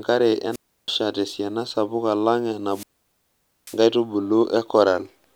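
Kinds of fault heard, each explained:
Wireless microphone squelch dropout: the radio signal fades, hiss rises, then squelch mutes the receiver, for 0.32 s before "tesiana sapuk alang" and 0.84 s after it. That hiss before each hole separates it from a clean, abrupt digital dropout.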